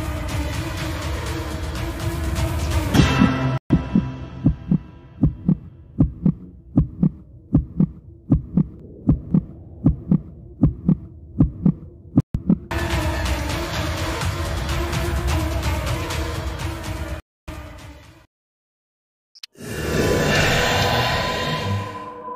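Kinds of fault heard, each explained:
Bluetooth stall: the sound drops to silence and resumes where it left off, about 125 ms at 3.58 s, 144 ms at 12.20 s and 279 ms at 17.20 s, likely the headphones' buffer running dry while delayed packets were resent. Unlike a codec dropout or crackle, each gap is clean silence.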